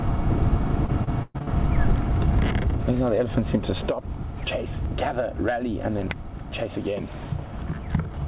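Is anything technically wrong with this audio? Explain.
Yes. From 0.86 to 1.49 s there's repeated packet loss, giving that robotic sound. Packets kept going missing, each hole got patched by stretching the previous sound, and about a third of that stretch ends up synthetic, with gaps up to 117 ms. It sounds choppy. Nothing sits above 4 kHz, which fits a narrowband G.711 call path.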